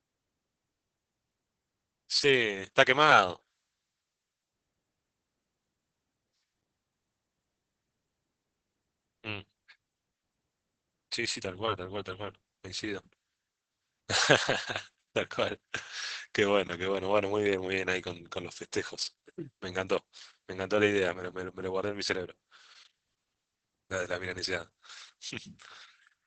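Throughout, the speech is muffled, hoarse and slightly robotic, cut off above 8 kHz. This is heavy Opus voice compression, with coarse SILK coding consistent with a bitrate near 10 kbps.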